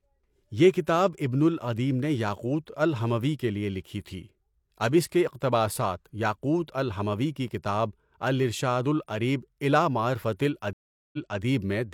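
A stream reconnect runs from 10.73 s to 11.41 s. The connection dropped, the speech stops dead for about 0.4 s, and the player then re-established the link and started a new decoder partway through the stream. Rather than picking up where it left off, playback resumes about 0.28 s earlier, because the server resent a short burst of already-played audio. The listener hears a gap followed by a brief repeat of the speech just before the dropout.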